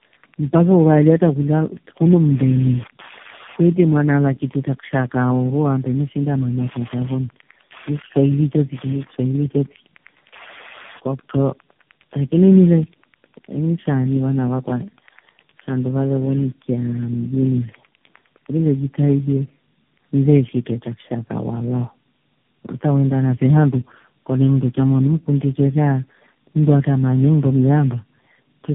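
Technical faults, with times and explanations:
throughout, tandem speech coding: The speech has been decoded and re-encoded across about four speech-codec links, which fits low-rate AMR-NB and CVSD hops joined by G.711. Each coder compounds the last one's errors, so the sound is rough, warbly and muffled, with nothing above 3.6 kHz.
0.00–18.52 s, Wi-Fi interference: A nearby Wi-Fi radio's beacon, repeating every 102.4 ms, is rectified by the audio circuit. It produces a steady ticking about ten times a second, roughly 20 dB below the speech, until it stops at 18.52 s.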